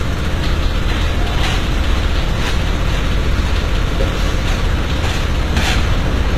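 HE-AAC compression, throughout: plainly audible codec damage, nothing above 14.9 kHz, and treble likely rebuilt from copied lower bands, turning gritty and metallic, which fits about 20 kbps.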